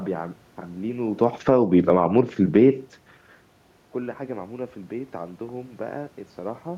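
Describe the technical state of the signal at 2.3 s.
At 2.3 s the level is sliding, and the room noise behind the speech sinks and rises along with it, which shows the change is happening in the gain stage rather than at the source.

Automatic gain falling runs from 1.03 to 2.71 s. The control judged the input too loud or its background too strong and eased its gain down by about 5 dB over those 1.7 seconds, so the speech and its background grow quieter together in a smooth fade rather than a sudden step.

Overlapping it, automatic gain rising runs from 1.55 to 2.92 s, lifting the level by about 4 dB over roughly 1.4 seconds. Here the control judged the signal too quiet and pushed its gain back up. At 2.3 s both adjustments are in progress, so the loudness drifts unevenly as one correction works against the other, with the whole sound, background included, swelling and sagging as a unit.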